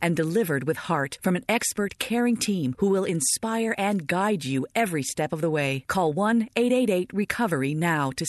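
The clip is speech carried over a WebRTC call path, and nothing is technically wrong with it.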